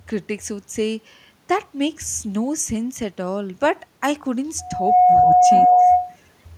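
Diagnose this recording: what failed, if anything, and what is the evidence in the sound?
A loudspeaker feedback squeal starts at 4.59 s and runs to 6.16 s. The failure is in the acoustic loop between microphone and loudspeaker: at 725 Hz the loop gain rose above one, so that frequency reinforced itself on each pass. It swells over a little under half a second to roughly 10 dB above the speech. A spectrogram shows a single bright horizontal line at 725 Hz, and the waveform envelope grows rapidly, then stays high.

From 5.67 s to 5.81 s the speech drops by around 15 dB for about 150 ms, while the squeal is still sounding. This points to call processing, most likely speech suppressed in double talk. The echo canceller could not tell the near talker from the strong loudspeaker return, so it attenuated both. On the waveform the speech envelope shows a short notch, and on the spectrogram the speech harmonics fade briefly.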